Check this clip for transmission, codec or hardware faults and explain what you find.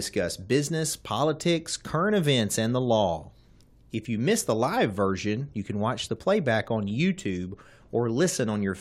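One fault is audible in the speech. At 6.17 s, an overlap between stream segments removes about 13 ms where adjacent 6-second segments collide, so the waveform jumps, producing a tiny skip.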